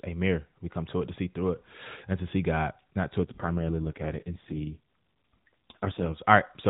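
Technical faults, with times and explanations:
3.22 to 6.19 s, AMR rate drop: the speech turns rougher, buzzier and more synthetic, with no gap and no change in the narrowband, telephone-like bandwidth, then regains its earlier, lightly coded quality after 6.19 s. That fits the network switching the AMR narrowband codec down from its 12.2 kbps mode to the 4.75 kbps mode on a weak radio link. Fewer bits go to describing the voice, so it is modelled far more coarsely.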